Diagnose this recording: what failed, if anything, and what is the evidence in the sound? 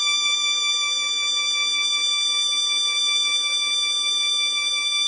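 The codec stage likely caused the damage through heavy Vorbis compression at a starved rate, which fits a bitrate near 20 kbps. Throughout the music nothing remains above 9.6 kHz, and the surviving treble is quantised so coarsely that detail becomes grainy hiss, roughening tones and smearing attacks.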